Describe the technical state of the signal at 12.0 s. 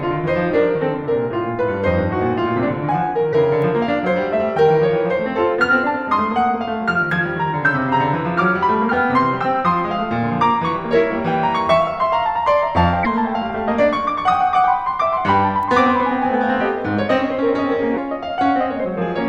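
At 12.0 s the music plays through cleanly, with no dropout, distortion, glitch or other fault at that point.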